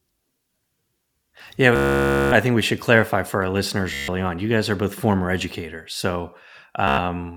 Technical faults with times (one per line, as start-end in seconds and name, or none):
1.76-2.32 Bluetooth stutter
3.94-4.08 Bluetooth stutter
6.88-6.98 Bluetooth stutter